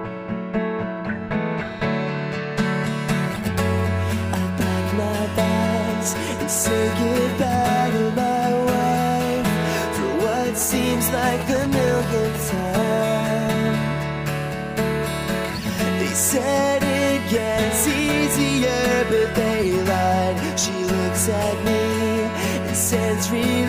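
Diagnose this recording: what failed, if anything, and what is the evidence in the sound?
The analogue wiring picked up GSM signalling bursts from 10.61 to 12.60 s: a galloping dit-dit-dit of short buzzes at about 217 Hz, roughly 10 dB below the wanted sound. A nearby 2G phone was exchanging short groups of radio bursts with the network, as it does before a call or message arrives. An analogue stage rectified the RF envelope, and the burst repetition rate became audible as the 217 Hz buzz.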